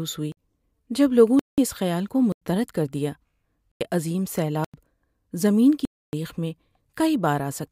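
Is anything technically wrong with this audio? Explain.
Yes. The speech has six blocks of digital silence, at 0.32, 1.39, 2.32, 3.72, 4.64 and 5.85 s, lasting between 50 and 279 ms. The output buffer likely went unfilled, so zeros were played; the repeated 93 ms gaps fit a 4096-sample buffer. Each cuts abruptly to silence and back.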